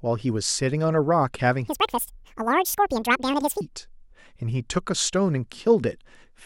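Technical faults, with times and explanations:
1.68–3.61 s: section at the wrong speed. Speech runs at double speed and jumps roughly ten semitones higher, likely from playback locked to the wrong clock rate.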